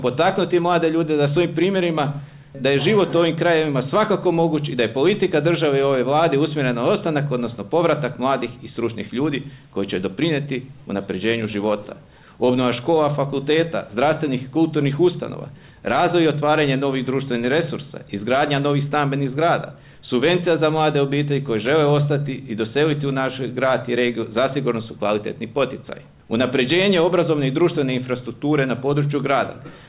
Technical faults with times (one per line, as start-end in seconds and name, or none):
none